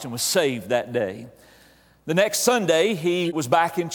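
A short chirp-like burst of noise cuts in from 3.25 to 3.35 s, peaking around -20 dBFS. It is a corrupt frame decoded: flipped bits in a couple of compressed frames were played anyway, so misread gains and codes scattered energy across the wrong frequencies.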